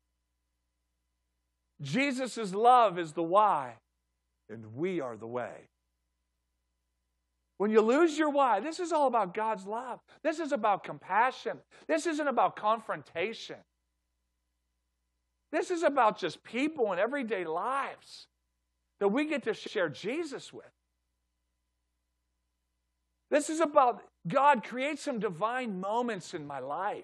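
At 8.12 to 8.14 s, after "you lose", and at 19.66 to 19.75 s, after "that we get to", repeated frames replay the same audio once. The first is a 23 ms stutter, the second a 93 ms stutter. Unlike a dropout, nothing is missing: the sound repeats and runs longer.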